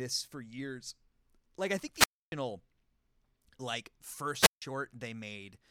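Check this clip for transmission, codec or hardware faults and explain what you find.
Two wireless microphone squelch dropouts break up the speech. Both times the radio link from an analogue FM microphone weakens until the receiver's squelch shuts its output. The first, from 1.94 to 2.32 s just after "I think", is a short rise of hiss or static and then about 284 ms of near silence before the voice returns. The second, from 4.39 to 4.62 s, follows the same pattern with a shorter hole of about 157 ms.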